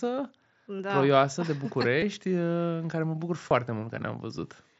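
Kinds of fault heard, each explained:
Concealed Bluetooth headset packet loss: headset voice packets failed to reach the phone, and the receiver patched each gap by repeating a matching slice of recent waveform. At 0.78 s, 2.00 to 2.02 s and 3.49 s, this leaves brief buzzy blips of 15 to 23 ms.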